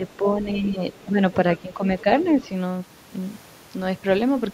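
A short speech clip with echo-canceller trouble. Speech suppressed in double talk shows up from 0.0 to 0.82 s, dipping a few dB, then at 1.09–1.19 s and 1.62–1.83 s, dropping around 10 dB, likely because the canceller ducked while both sides spoke. The other side's voice is leaking through, very faintly, at 0.94–1.05 s and 2.42–2.49 s as brief scraps of what is likely residual loudspeaker echo.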